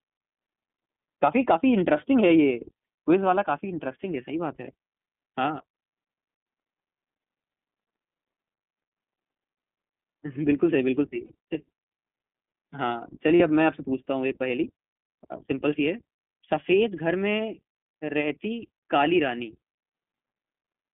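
iLBC codec coding runs through the whole speech clip: the band is held to roughly 200 Hz to 3.5 kHz, and the plainly audible rough, slightly synthetic texture fits iLBC's 15.2 kbps mode, which codes the excitation of each 20 ms frame independently. Lost iLBC frames occur at 11.26 to 11.31 s and again at 13.36 to 13.42 s, each about 40 ms. The decoder fills the gaps by repeating the last pitch cycle mixed with noise, producing a brief held, buzzy vowel. The sound recovers almost at once because each iLBC frame stands alone.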